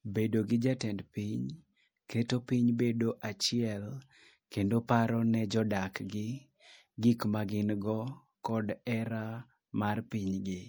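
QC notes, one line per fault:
Throughout, MP3 compression: plainly audible watery, swirly texture with metallic chirps on s sounds, likely a bit-starved encode fitting 64 kbps, zeroing weak frequency lines frame to frame.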